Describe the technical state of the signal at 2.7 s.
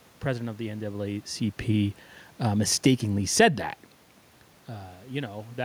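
At 2.7 s the automatic gain is falling, from 2.44 to 3.55 s. The control judged the input too loud or its background noise too strong. Speech and background sink together by about 3 dB.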